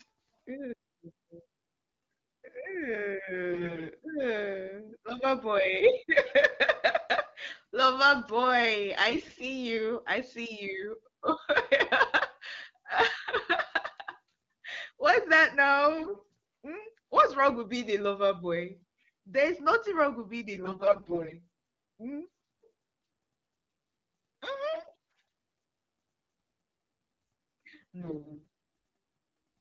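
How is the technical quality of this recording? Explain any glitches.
The speech carries six short bursts of corruption over an AMR-WB link, whose clarity fits a 12.65 kbit/s mode.

AMR bit errors at 3.52–3.90 s, 9.09–9.47 s, 15.98–16.23 s, 20.54–21.36 s (just after "nothing wrong with being"), 24.74–25.20 s and 28.00–28.47 s: flipped low-priority bits misplace excitation pulses and skew pitch, gain and spectral detail, so the speech turns hoarse, scratchy and gargly.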